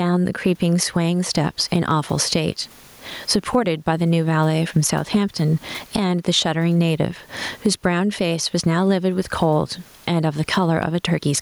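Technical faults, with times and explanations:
Throughout, gain pumping. The swing is around 15 dB. The microphone gain is likely set far too high, so a fast limiter or compressor clamps down on each loud syllable and releases in the gaps. The room noise sits about 43 dB below the speech. Loud and quiet parts sit close together, and the speech sounds squashed.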